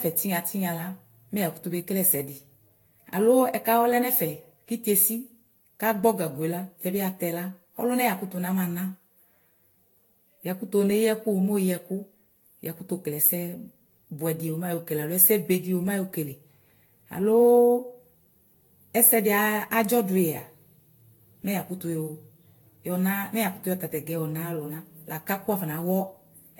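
Throughout the speech, the sound is swirly, smeared and hollow, with blurred attacks and nothing above 19.2 kHz. This points to generation loss, likely from repeated lossy re-encoding, consistent with Vorbis at around 68 kbit/s applied roughly seven times, each pass adding fresh quantisation damage.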